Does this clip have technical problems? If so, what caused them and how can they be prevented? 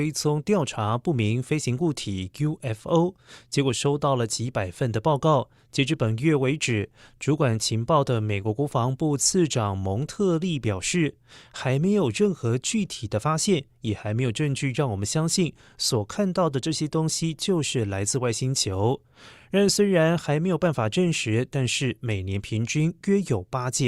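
No, nothing in this speech recording stood out as a technical problem on listening, so there is nothing here that needs preventing.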